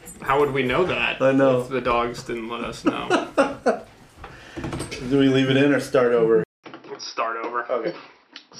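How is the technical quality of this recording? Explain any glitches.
Quality holds up until 6.44 s, where the input likely switched to a poorer device: there's a 0.2 s gap, then the sound turns dull with nothing above 5.7 kHz, drops about 5 dB, and picks up a faint new background noise through the end.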